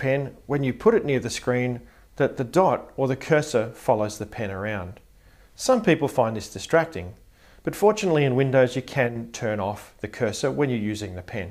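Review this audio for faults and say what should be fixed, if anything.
Nothing to fix; no faults found on review.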